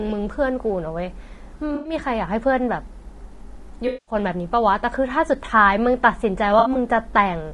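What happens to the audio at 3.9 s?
From 3.87 to 4.15 s the decoder lost a run of AAC frames and filled the gap by reusing the last good spectrum with scrambled phase or interpolated energy. This AAC frame loss with concealment turns the speech there into a smeared, noisy or phasey patch.

Underneath, the whole clip carries the roughness of low-delay AAC compression, likely AAC-ELD at a low rate near 32 kbps. Its short frames resolve pitch harmonics poorly, so the voice sounds grainy, with noise between harmonics and a lowered or synthetic-sounding top band.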